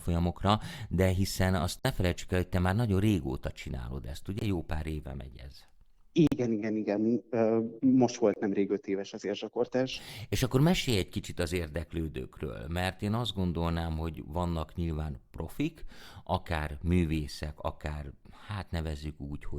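It's a speech clip with four abrupt dropouts from corrupt frames muted, at 1.79 s (after "de hiszen azt"), 4.39 s (after "nagyon régóta csinálod ezt"), 6.27 s (before "igen igen") and 8.33 s. Each gap runs about 30 to 70 ms, consistent with a frame or three the decoder rejected and replaced with silence, while timing stays intact.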